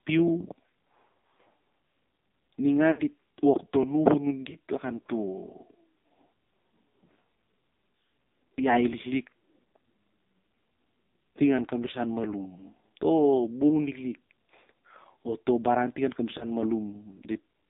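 The whole clip passes through the AMR narrowband mobile codec. The band runs from 200 Hz to 3.7 kHz. Heavy coding makes the speech buzzy and synthetic, which fits a low AMR-NB mode near 5.9 kbps.

At 2.92 to 3.01 s, lost AMR speech frames cause a gap of about 60 ms, which fits three dropped frames. The decoder stretches the last good sound and lets it fade. Single-frame losses at 4.50 to 4.58 s and 16.38 to 16.45 s cause brief dips and warbles.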